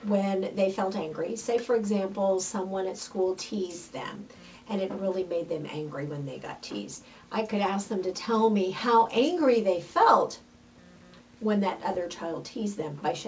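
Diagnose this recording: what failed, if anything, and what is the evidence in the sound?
Nothing in the recording points to a failure at any stage. The sound has passed through a call path whose band ends at 8 kHz, which fits a wideband call codec such as G.722 at 64 kbps.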